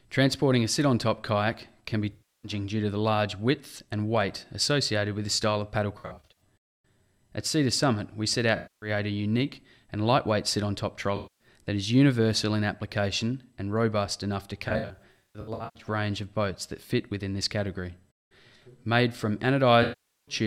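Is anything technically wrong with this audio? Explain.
Yes. AAC frame loss with concealment occurs at 2.12, 5.98, 8.56, 11.16, 14.68 and 19.82 s, lasting about 0.3 to 1.2 s each. The 5.98 s and 14.68 s losses are scattered, over 0.38 s and 1.1 s respectively. With data missing, the decoder recycles the last good spectrum, producing smeared, phasey, noisy patches. A spectrogram shows blurred, stretched bands, and the waveform shows dipping envelopes.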